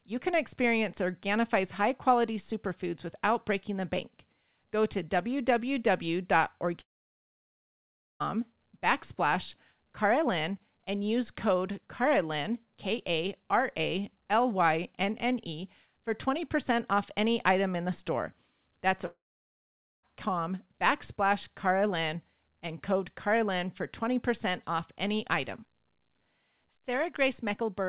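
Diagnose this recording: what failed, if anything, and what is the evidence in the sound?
The speech cuts out twice, from 6.8 to 8.22 s and from 19.06 to 20.05 s. Each time, the last sound smears briefly into a fading buzz, then drops to silence for about 1.36 s and 0.86 s, and the talker resumes further along with that stretch gone. This is likely a long network dropout: packets stopped arriving, the receiver's concealment extended the final frame and faded it out, and playback resumed at the next packet received. The audio above 4 kHz is absent throughout, as expected from a narrowband call codec such as G.711 A-law.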